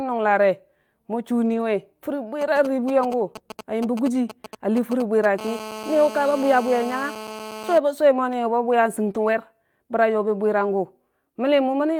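From 1.45 to 1.63 s, a lost packet rebuilt from error correction: about 100 ms, which fits five separate 20 ms packets, plays as rougher, noisier audio with no gap, unlike concealment, which guesses the missing audio.

From 2.41 to 5.40 s, GSM signalling bursts from a nearby 2G phone, rectified by the audio circuit, produce galloping dit-dit-dit ticks and brief 217 Hz buzzes roughly 10 dB below the sound. The pattern is irregular rather than continuous.

Inside that stretch, 4.13 to 4.15 s brings another 20 ms stretch rebuilt from error correction, briefly grainier but unbroken.

From 5.41 to 7.78 s, GSM phone buzz takes over. The phone's call transmission pulses 217 times per second, giving a steady, raspy, harmonic-rich buzz about 13 dB below the sound. It is continuous where the signalling bursts were intermittent.

Error-correction rebuilds recur at 7.29 to 7.31 s and 9.07 to 9.09 s, each about 20 ms of rough, noisy audio.

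At 9.11 to 9.15 s comes a short concealed packet loss. About 20 ms never arrived, and the decoder extrapolated the preceding sound, giving a brief smear or wobble. Here the audio is invented rather than carried by a backup copy.

From 9.15 to 9.29 s, an 80 ms error-correction rebuild follows, consistent with four lost packets, and it sounds coarse and noisy.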